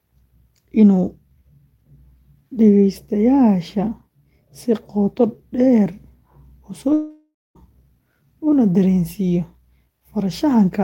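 From 6.93 to 7.57 s the sound stretches into a fading buzz, then 0.21 s of silence; 0.62 s is lost, likely to a long network dropout.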